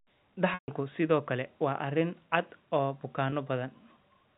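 At 0.54 to 0.68 s, packet loss with pitch repetition leaves about 140 ms of audio missing, which fits a run of seven 20 ms packets. The receiver repeats the last pitch period, so the speech holds briefly, then fades to silence over about 50 ms and cross-fades back in just before "sidoo kale waa arrin". At 3.30 to 3.32 s a single 20 ms gap is bridged the same way and comes across as a brief, slightly buzzy hold.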